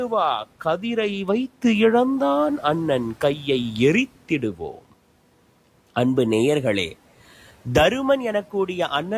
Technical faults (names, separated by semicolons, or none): speech cut by the noise suppressor